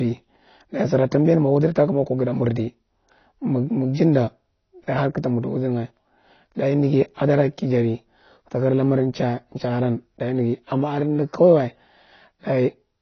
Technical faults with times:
0.00-13.02 AAC compression

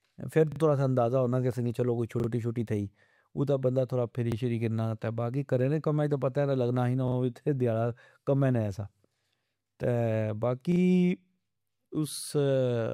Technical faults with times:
0.52-0.60 repeated buffer
2.20-2.28 repeated buffer
4.32-4.36 repeated buffer
7.08-7.16 repeated buffer
10.72-10.80 repeated buffer

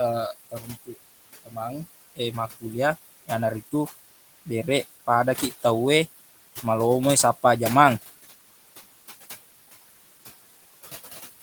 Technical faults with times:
0.00-11.42 noise suppressor artifacts
0.50-0.69 speech cut by the noise suppressor
1.44-1.57 speech cut by the noise suppressor

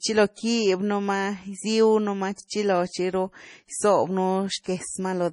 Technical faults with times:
0.00-5.32 MP3 compression
0.34-0.38 pre-echo
2.35-2.38 pre-echo

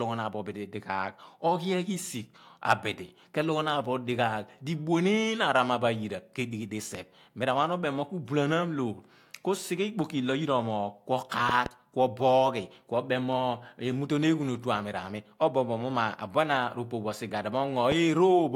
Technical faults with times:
6.95-6.97 loud pop
11.49-11.68 loud pop
17.92-17.94 loud pop

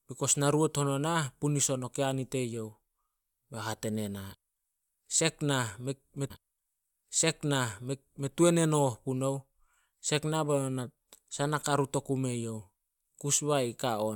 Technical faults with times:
6.29-8.31 stream segment repeated

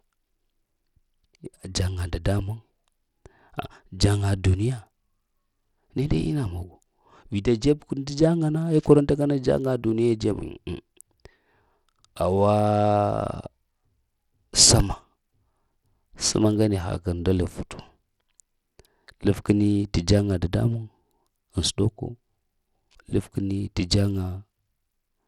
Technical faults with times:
0.00-25.27 Bluetooth SBC compression

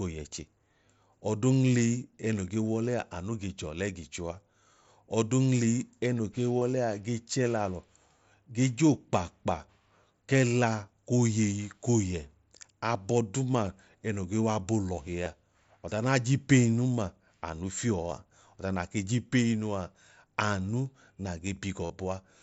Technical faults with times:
6.60 concealed Bluetooth headset packet loss
15.24 concealed Bluetooth headset packet loss
18.10 concealed Bluetooth headset packet loss
21.86-21.90 concealed Bluetooth headset packet loss

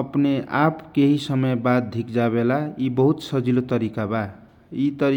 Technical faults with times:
none

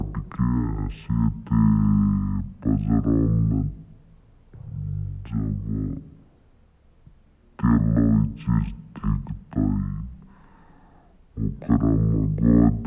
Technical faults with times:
0.00-12.86 wrong sample rate

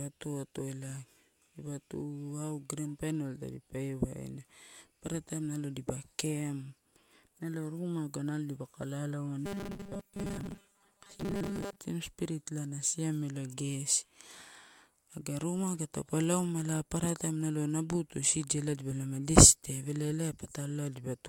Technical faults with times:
9.45-11.81 robotic sound from repeated short buffers

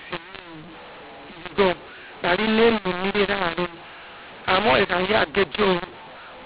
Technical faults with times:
0.00-6.45 mu-law and A-law mixed up

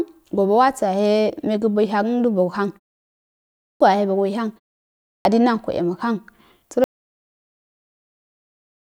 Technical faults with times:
3.50-3.80 clipped start after a pause
4.95-5.25 clipped start after a pause
6.84-8.96 audio dropout to silence

